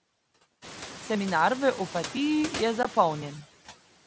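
Throughout the speech, the background noise drops away between phrases and swells back under the voice. These are noise suppressor artifacts: the suppressor pulls down about 17 dB in bands it judges to be steady noise, frame by frame, including after the room noise rises at around half a second.

At 2.83 s a brief hole about 15 ms long cuts the speech with hard edges. This is unconcealed Bluetooth headset packet loss on the mSBC link, which fits two lost frames. The missing audio was not patched over.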